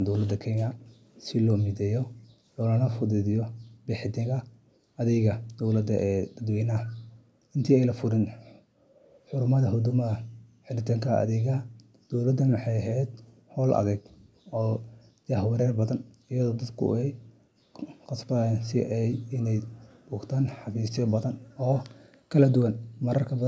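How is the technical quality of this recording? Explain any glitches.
The recording has two kinds of call-processing fault: repeated dips in the room background and one faint returned echo near the end. The audio stops at about 8 kHz, which fits a 16 kHz call sample rate.

Background gated by the echo canceller occurs at 2.24–2.41, 10.42–10.53, 11.7–12.1, 13.06–13.56, 14.04–14.34 and 21.38–21.56 s. Each time, the canceller clamped the microphone while the loudspeaker played, so the room tone drops by about 40 dB, or about 12 dB at 2.24 s, for a tenth to half a second. No sound comes back. That absence is what separates it from echo.

Echo leak appears at 22.6–22.65 s as a very brief, faint scrap about 35 dB below the speech. It arrives 305 ms after the original, which is likely echo-canceller residue from a far-end loudspeaker. Unlike gating, something is added rather than removed.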